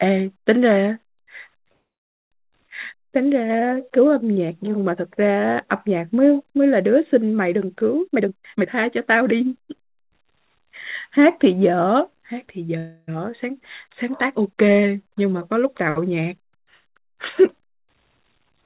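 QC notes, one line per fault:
1.72–2.34 s, call audio freeze: the sound halts, a brief tail fades into about 0.53 s of silence, then resumes where it stopped. This is likely a jitter buffer running empty. Nothing is lost, unlike a skip.
2.68–2.70 s, skip ahead: playback jumps forward almost seamlessly, losing around 0.3 s of audio. The two sides are spliced directly with no pause, unlike a freeze's inserted gap.
2.95–5.67 s, jitter buffer slow-down: the audio runs at 91% speed, stretched by 260 ms through repeated pitch periods. Pitch stays unchanged while sounds drag, unlike a tape-style slowdown.
8.07–10.31 s, jitter buffer speed-up: the audio runs at 127% speed, with roughly 0.7 s trimmed in small pitch-period cuts. It sounds hurried at the same pitch, without a single audible jump.
12.78–13.10 s, call audio freeze: a 300 ms hold, filled almost entirely by the last sound continued as a fading buzz, with only a 10 ms dip to silence. 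This is likely jitter buffer underrun. It resumes intact.
18.46–18.65 s, jitter buffer speed-up: a sharp 195% rush at the very end, with about 0.2 s removed. It is far faster than the earlier speed-up, yet the pitch still holds.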